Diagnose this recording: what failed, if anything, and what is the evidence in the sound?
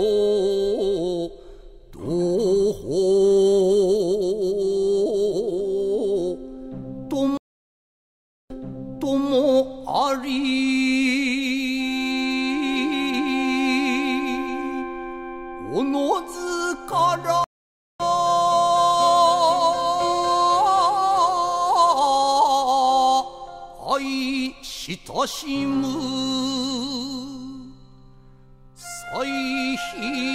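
Network stage: a stream reconnect, twice. At 7.37 s the audio goes silent for 1.13 s. It then resumes 0.78 s earlier, repeating material. At 17.44 s a 0.56 s gap skips about half a second. Each time the connection dropped and a fresh decoder restarted mid-stream.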